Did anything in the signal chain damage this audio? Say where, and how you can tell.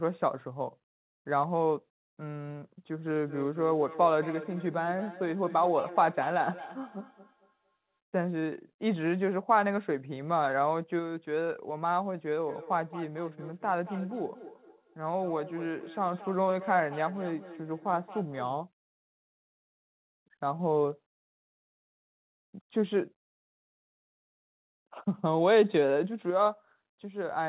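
Yes. Feedback echo between two devices at 3.26–8.0 s and 12.41–18.62 s: the speech returns about every fifth of a second, at its loudest about 14 dB below. A second device's playback re-enters the microphone, beyond the echo canceller's reach.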